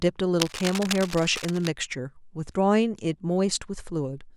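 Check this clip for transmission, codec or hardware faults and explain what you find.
One hardware fault is audible: cable scratch noise from 0.40 to 1.67 s. Dense, irregular scratching and rustling sits about 10 dB under the speech, likely from a worn cable or connector being moved. Its uneven bursts over more than a second set it apart from isolated clicks or steady hiss.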